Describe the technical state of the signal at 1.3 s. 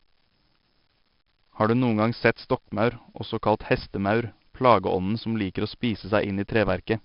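4-bit ADPCM compression is present at 1.3 s and throughout the speech. Each sample is coded as a coarse step from a prediction, so the error is a gritty hiss that rides the level, harsh on sharp attacks. Nothing above 5.3 kHz survives, which fits a low-rate stream near 44 kbps.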